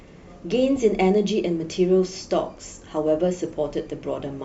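Speech, with two short errors from a corrupt frame decoded. The first, at 0.76 to 0.78 s, peaks around -25 dBFS. The second, at 3.47 to 3.50 s, is softer, near -35 dBFS. Flipped bits sent energy to wrong frequencies, which fits one or two damaged frames each time.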